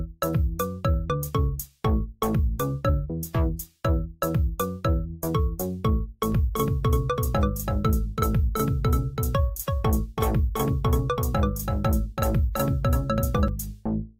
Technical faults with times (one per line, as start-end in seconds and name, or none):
6.32-13.48 doubled audio track